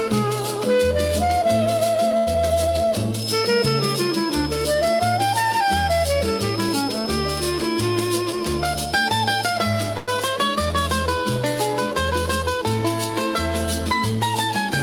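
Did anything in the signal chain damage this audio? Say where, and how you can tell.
Yes. All four problems come from the network and the receiver's jitter buffer.

The first is a short stall from a late packet at 2.17 to 2.29 s. A packet arrived late, the buffer ran dry, and the receiver stretched the last sound for about 94 ms until the packet came in, then resumed from the same point. Nothing is lost, but the delay grows by 94 ms. On a spectrogram the harmonics run flat and frozen through that span. The waveform shows a repeating, slightly buzzy cycle with a small dip in level.

Just after that comes a short concealed packet loss at 2.33 to 2.36 s. Here about 40 ms of audio never reached the decoder. The receiver filled only about 15 ms of the hole by extending the preceding sound, which cuts the delay by roughly 30 ms. You hear a quick smear or wobble. On a spectrogram there is a brief blurred patch that blends back into the real audio.

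From 8.21 to 9.17 s there is a jitter buffer speed-up. The buffer was holding more audio than its target, so the receiver repeatedly cut out short pitch-period slices, removing about 70 ms in total. The sound plays at about 106% speed with unchanged pitch and feels slightly hurried. On a spectrogram, events sit closer together while harmonic spacing stays the same. The waveform shows tiny splice points between cycles.

At 9.97 to 10.10 s there is a call audio freeze. The sound hangs on its last moment as a buzz or hiss that fades for about 103 ms, never falling to silence, then continues from where it stopped with nothing missing. The delay grows by 103 ms. The likely cause is packets held up in transit that emptied the jitter buffer. A spectrogram shows a frozen, smoothly fading band, and the waveform shows a repeated, decaying cycle.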